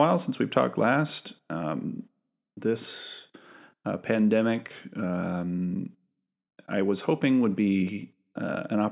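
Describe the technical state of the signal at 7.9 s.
At 7.9 s the speech signal is intact, with no audible technical fault at that moment.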